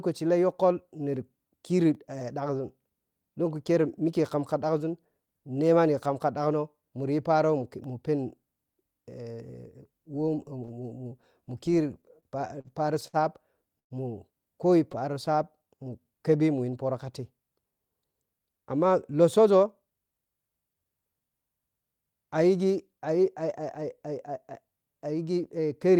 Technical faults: block of digital silence; repeated stalls (stutter); call audio freeze; jitter buffer slow-down; jitter buffer speed-up

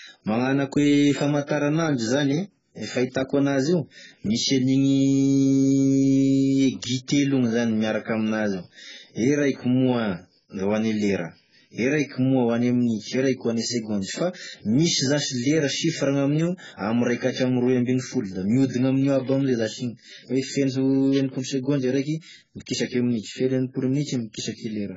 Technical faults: AAC compression

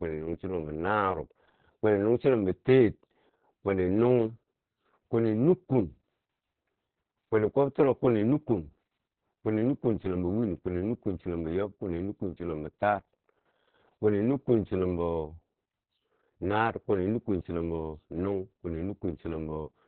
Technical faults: Opus voice compression

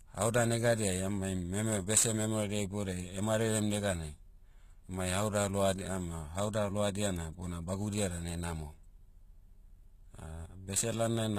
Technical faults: sample clock jitter; HE-AAC compression

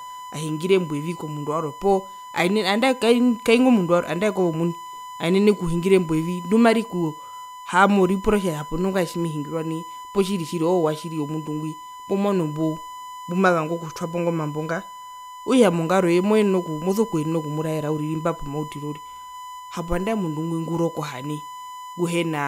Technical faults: USB whine; CD scratch ticks

